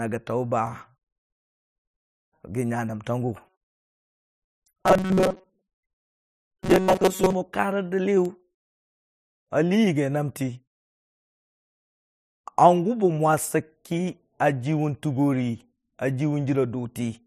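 From 3.45 to 7.35 s, robotic sound from repeated short buffers makes a 188 Hz buzz, likely from 5.3 ms loops; the spectrogram shows evenly spaced harmonics.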